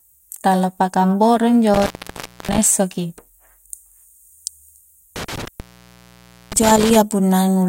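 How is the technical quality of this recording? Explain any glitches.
The speech has two dropouts from an intermittent contact. Around 1.74 to 2.58 s, right after "tala paka amboro injo," and again from 5.16 to 6.96 s, a loose cable or plug opens briefly, for about 0.63 s and then 0.92 s. The audio cuts out, leaving faint hiss, with a crackle as the contact breaks and remakes.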